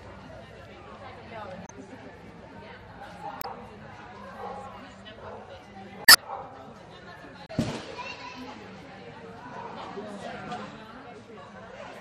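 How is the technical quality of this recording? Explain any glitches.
The recording has clear technical problems: a constant compression coloration plus four short glitches.

Throughout the clip, the sound has the watery, swirling texture and dulled top end of plainly audible MP3 compression, likely at a low rate such as 64 kbps. Starved of bits, the encoder removes everything above a fixed treble cutoff and lets weak frequency lines flicker in and out between frames. Sharp attacks smear and bright content turns metallic. A spectrogram would show a flat ceiling across the top of the band and patchy, speckled holes beneath it.

Four short glitches come from damaged data in a compressed stream, at 1.64–1.70 s, 3.38–3.45 s, 6.05–6.16 s and 7.45–7.50 s. At each point the decoder reads corrupt bytes, loses track of the frame structure and has to find the next valid header. Each is heard as a brief chirp, squawk, click or short hole. 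A waveform would show abrupt discontinuities there, and a spectrogram would show short vertical smears or gaps breaking the normal pattern.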